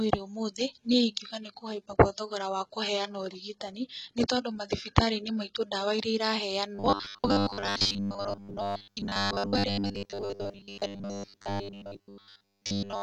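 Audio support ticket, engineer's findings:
Adaptive stream starting at a low bitrate, 0 to 6.0 s. Player began on a low tier before measuring throughput. Treble missing or synthetic, stronger codec artefacts. Points to HE-AAC near 16 kbit/s stepping to AAC-LC near 96 kbit/s. Abrupt jump, no gap.

Robotic sound from repeated short buffers, 6.75 to 13.02 s. Likely starved playout buffer: 10 ms chunks replayed, most real audio skipped. Rigid metallic buzz at 100 Hz, only loosely following the speech.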